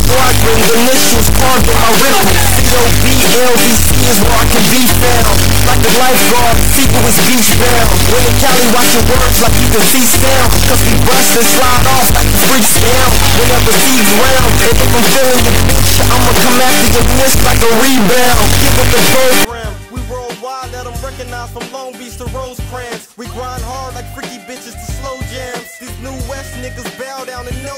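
Integer read as float runs from 0.00 to 19.45 s: the sound points to 32-bit integer samples interpreted as 32-bit floats, producing tiny or huge values that slam between silence and clipping, heard as a harsh, extremely loud square-wave buzz dropping out in quiet moments.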